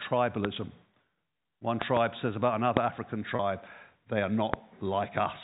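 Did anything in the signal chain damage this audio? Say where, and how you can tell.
Yes. Sharp pops, about 20 dB above the speech, cut through at 0.45 s, as a quick double between 1.82 and 1.99 s just before "says about another", at 2.77 s just after it, and at 4.54 s after "they are". These loud pops are likely voltage steps in the analogue wiring, from a plug, switch or static discharge.

At 3.36 s there is a brief held, buzzy tone lasting about 30 ms, which fits the loss of a single network packet. This is packet loss with pitch repetition: the receiver filled the hole by repeating the last pitch period before the speech resumed.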